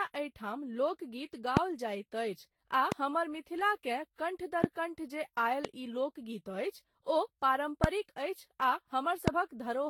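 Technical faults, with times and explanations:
throughout: generation loss. The speech sounds swirly, hollow and smeared, with softened consonant attacks, more than a single Vorbis encode near 70 kbit/s would cause. It was likely re-encoded about ten times, each pass adding fresh quantisation noise and spectral holes. Nothing remains above 19.3 kHz.
1.57–1.59, 2.92–2.94, 4.64–4.66, 5.65–5.67, 7.84–7.86 and 9.28–9.30 s: loud pop. Six single sharp pops sit on top of the speech, which carries on underneath. They peak about 25 dB above it, and the one at 5.65 s about 20 dB. The pop at 4.64 s comes just before "कण्ठ जे", and the one at 5.65 s between "कण्ठ जे" and "ई लोकगीत". Each is likely a brief voltage spike from a switch, static or a driver glitch.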